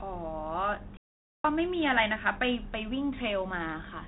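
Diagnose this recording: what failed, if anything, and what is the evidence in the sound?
At the playback stage, a playback stall occurred, likely because the player ran out of buffered data or its thread was blocked. The speech drops to silence mid-flow from 0.97 s to 1.45 s, a gap of about 0.47 s, then resumes.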